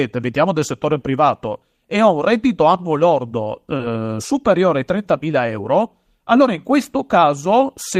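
At 3.77 to 3.81 s, after "un reddito annuo lordo", short concealed packet loss: about 20 ms of speech went missing, patched by extrapolation. It sounds like a tiny smear, and shows as a brief blurred, repeated-looking patch in the spectrogram.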